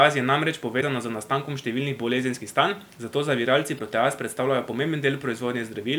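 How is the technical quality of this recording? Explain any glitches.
The recording quality is compromised by two separate faults: a grainy texture throughout and two short digital glitches.

Across the whole speech track there is a rough, grainy distortion, roughly 35 dB below the speech, that rises and falls with the voice and turns quiet passages gritty. The likely cause is low bit depth without dither, consistent with rounding to about 9 bits, so the rounding error follows the signal instead of becoming a steady hiss.

At 0.77 to 0.83 s and again at 3.75 to 3.81 s, a brief glitch of about 56 ms interrupts the audio. These are damaged data in a compressed stream. Corrupted bytes make the decoder misread those frames and lose sync until it finds the next valid frame header, producing a short glitch.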